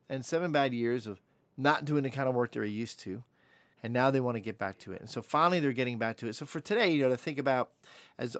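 From 4.75 to 5.01 s, an echo leak is audible: a faint, delayed copy of the speech, trailing the original by about 217 ms and sitting far below it in level. The likely cause is a far end playing the call on a loudspeaker, where the echo canceller failed to remove everything its microphone picked up and returned the residue. The audio is band-limited at 8 kHz, consistent with the call codec path.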